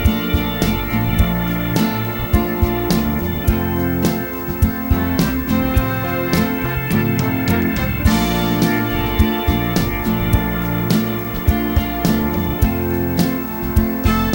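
Video or display buzz runs through the whole clip, from start to finish. A picture source or its cable is coupling into the audio path, laying a buzz at the 59.94 Hz field rate, with a hashy edge above it, under the sound. A thin high whine near 15.7 kHz from the line scan rides on top. The interference sits only about 10 dB below the wanted signal, so it stays plainly audible throughout.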